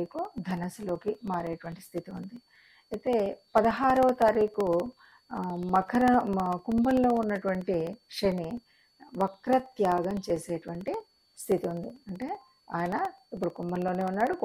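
From 0.06 to 14.4 s, periodic USB or driver dropouts blank about 2 ms every 64 ms: ticks, evenly spaced waveform gaps, vertical spectrogram lines.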